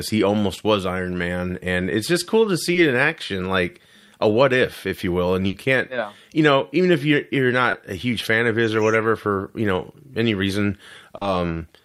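It's a speech recording with a few short concealed packet losses, at 2.73–2.77 s after "it's just cool to", 7.71–7.75 s, and 11.17–11.23 s after "you know any reason": the receiver papered over missing audio, leaving brief smears. There's also one burst of packet loss at 5.47–5.55 s, just before "can't yeah you know", where about 60 ms got filled by a fading continuation of the last sound before the sound skips ahead.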